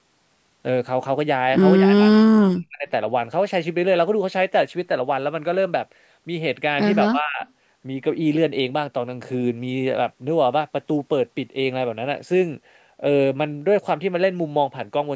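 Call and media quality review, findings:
Speech suppressed in double talk, 1.79–2.88 s and 7.05–7.41 s. Likely echo canceller mistaking near-end speech for loudspeaker echo during overlap and attenuating it. Speech ducks roughly 40 dB, then about 25 dB.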